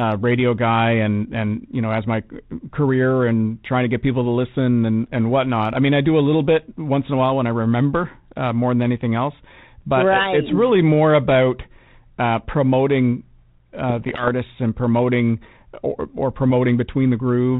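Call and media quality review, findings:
Bit errors on ADPCM link, 5.03–5.12 s, after "get people to listen", before "and whatnot I mean": pops and rough burst, brief level jump. Flipped bits derail decoder step size and predictor, so damage rings on. Waveform: spiky, uneven envelope; spectrogram: broadband vertical streaks.

Same fault, 13.90–14.29 s, before "and promoting or or": longer rasping burst from a low error rate of a few tenths of a percent. Spectrogram shows smeared broadband patches, capped at the 4 kHz limit of the 32 kbit/s G.726 path.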